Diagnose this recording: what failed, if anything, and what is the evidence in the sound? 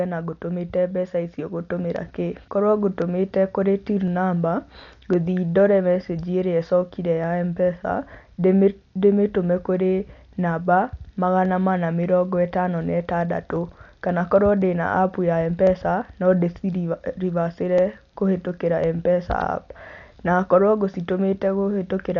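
Speech sounds dull, nothing above 7 kHz, with rough fluttering noise, at the codec stage: likely Dolby Digital compression, starving bands of bits, fitting about 48 kbps.

Regular clicks every 1.05 s from 0.91 s to 22.01 s point to the buffer stage: likely clock drift buffer slips, roughly 300 ppm apart, dropping or repeating about 15 samples.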